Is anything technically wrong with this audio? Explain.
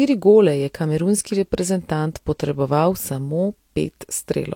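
Yes. Throughout the speech, the sound carries two layers of compression damage heard together, likely from transcoding between lossy codecs. The smeared, watery detail fits a Vorbis encode near 66 kbit/s, re-encoded as HE-AAC at 48 kbit/s. A spectrogram shows the lowest high-frequency cut-off, with blotchy, patchy upper bands.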